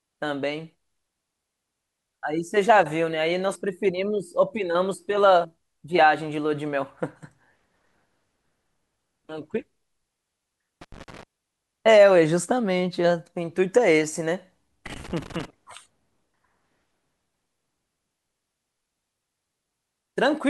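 An irregular burst of scratchy crackle breaks into the speech from 10.81 to 11.23 s and again from 14.86 to 15.45 s. This is loose connector crackle: a worn or dirty contact intermittently drops and restores the signal.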